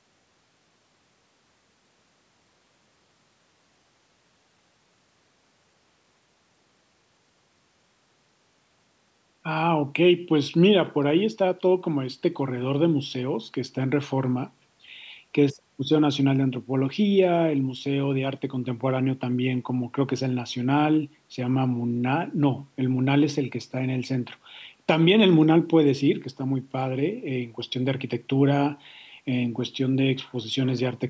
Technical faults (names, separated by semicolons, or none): none